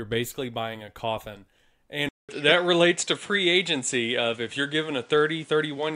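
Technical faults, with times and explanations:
2.09 s to the end: input switched to a poorer device. A 200 ms silence opens the change. After it the speech loses its top end, with nothing above 10.3 kHz, so it sounds duller than before. The level shifts by about 5 dB, and a new, fairly quiet noise floor appears about 35 dB below the speech. This is likely a change to another microphone or a headset's call profile, with a narrower band and a different gain and self-noise.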